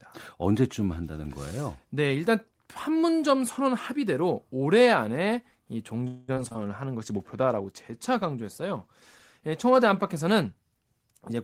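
Speech, with four kinds of fault packed into the second half. At 6.07 s the sound stalls into a held, fading buzz or hiss until 6.43 s. This is a call audio freeze, likely from packets delayed in transit draining the jitter buffer. About 0.2 s of filler is inserted, nothing is lost, and everything after runs that much later. Three short concealed packet losses follow, at 6.34 to 6.38 s, 6.48 to 6.53 s and 6.53 to 6.56 s. Each is a 20 ms hole that the decoder patches by extending the preceding sound. They come across as quick smears or wobbles, the last two back to back. From 6.98 s to the end there is a call bitrate drop. The encoder falls from 32 to 17 kbps after the bandwidth estimate sinks, and stays at the bottom for 2.88 s. The speech turns coarser and rougher through that stretch. At 11.12 to 11.35 s a jitter buffer speed-up trims tiny pitch-period slices to shed excess delay. Playback runs at 137 percent speed with pitch unchanged. 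It cuts roughly a tenth of a second and sounds briefly rushed.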